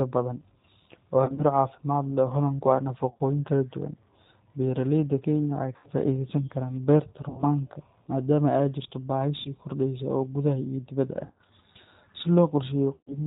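Throughout, the speech sounds band-limited, with nothing above 4 kHz, and slightly rough and synthetic. This plainly audible damage comes from the G.729 codec at 8 kbit/s. Rather than carrying the waveform, it sends a vocal tract model, a pitch estimate and a few pulses per 10 ms frame, and the decoder rebuilds an approximation of speech from those.

Seven times the speech briefly turns into a stretched, fading sound before recovering: 1.24 to 1.44 s, 3.10 to 3.22 s just before "kala duwan", 5.76 to 5.88 s, 7.29 to 7.44 s, 9.39 to 9.48 s just before "kordheysa oo gudaha", 11.25 to 11.40 s, and 12.95 to 13.18 s. This is VoIP packet loss concealed by the speech codec. Between 60 and 120 ms went missing each time, and the decoder kept repeating its last pitch and filter at falling gain. The voice stays weak or distorted for tens of milliseconds or more after real packets resume.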